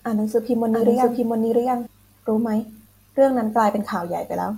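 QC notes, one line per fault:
0.73–1.87 s, doubled audio track: a same-level copy of the speech trails roughly 0.7 s behind, dry and abruptly switching in and out, likely from a slower second capture path.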